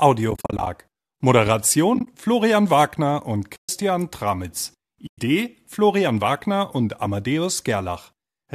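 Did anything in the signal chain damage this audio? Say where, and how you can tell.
Yes. The damage enters at the network stage and shows up at the decoder. It is AAC frame loss with muting. Soft-edged holes open at 0.31–0.67 s, 1.95–2.07 s, 3.56–3.69 s and 5.07–5.18 s. The first two break into short, scattered gaps. Each gap fades out and back in. The decoder zeroes the missing frames, and overlapping windows smooth the edges. The gap sizes fit 10 ms frames, likely from low-delay AAC.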